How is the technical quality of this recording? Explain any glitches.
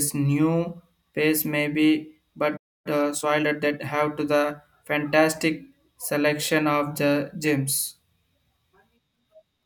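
The recording has two linked playback glitches near the three-second mark.

Playback stall, 2.56 to 2.87 s: the speech cuts out mid-flow into about 280 ms of silence. The likely cause is that the player ran dry of buffered data or its output thread was held up, so nothing reached the output until it recovered.

Time-compressed catch-up, 2.87 to 3.99 s: once the speech returns, it runs hurried at about 1.25 times normal speed while keeping its pitch. The player is shedding the backlog from the stall by dropping short slices and cross-fading across the joins.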